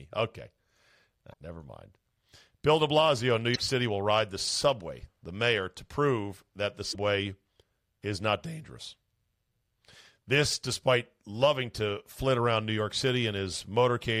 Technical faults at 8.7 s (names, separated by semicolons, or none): none